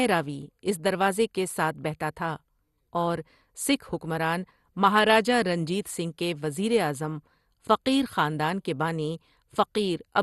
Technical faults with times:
0.00-10.23 MP2 compression

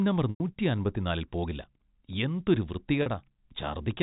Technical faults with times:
0.30-0.40 packet loss with pitch repetition
3.02-3.06 packet loss with pitch repetition

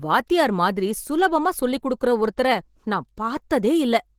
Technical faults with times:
0.00-4.19 Opus compression

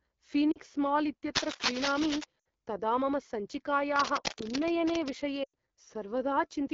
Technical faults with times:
0.00-6.74 AMR wideband (HD Voice) codec
0.52-0.58 lost AMR speech frames
1.33-2.24 cable scratch noise
2.40-2.46 lost AMR speech frames
3.96-5.14 cable scratch noise
5.44-5.55 lost AMR speech frames

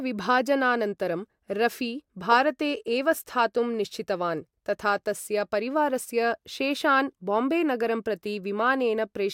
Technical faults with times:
none

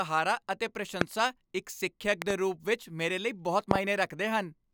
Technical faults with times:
1.01-1.03 loud pop
2.22-2.33 loud pop
3.71-3.78 loud pop

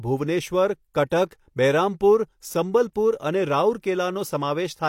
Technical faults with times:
0.94-1.11 pre-echo
2.93-2.95 pre-echo

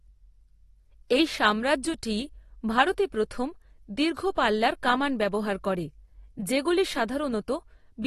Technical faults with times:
0.00-8.07 AAC compression

